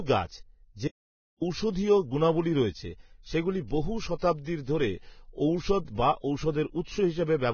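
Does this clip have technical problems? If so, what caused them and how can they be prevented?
Yes. Vorbis compression, throughout: heavy codec damage with nothing above 6.6 kHz, likely from low-quality encoding near 16 kbps that quantises treble into grainy hiss. Encode at a higher quality setting or keep an uncompressed master.

Audio dropout to silence, 0.88 to 1.41 s: the sound cuts to dead silence for about 0.53 s, likely because the input was briefly lost while recording continued. Secure cables and connections and monitor the input while recording.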